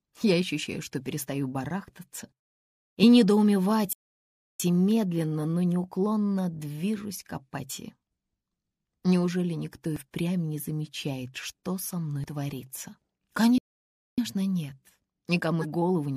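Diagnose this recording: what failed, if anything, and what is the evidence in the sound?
At the codec stage, damaged data in a compressed stream produces short blips at 3.02 s, 7.69 s, 9.96 s and 12.24 s, and a longer one from 15.61 to 15.65 s. Corrupt bytes made the decoder misread those frames and hunt for the next valid header. On a spectrogram each shows as a thin vertical disturbance breaking the normal texture. The waveform shows an abrupt, jagged discontinuity a few tens of milliseconds wide at most.

At the playback stage, playback stalls cut the sound out from 3.93 to 4.60 s, about 0.67 s, and again from 13.58 to 14.18 s, about 0.6 s. The sound halts mid-flow, goes silent, then resumes. The likely cause is the player starving for data or its output thread being blocked, so the device received nothing to play. The waveform shows a flat, silent line for each gap, and the spectrogram shows a clean blank column across all frequencies.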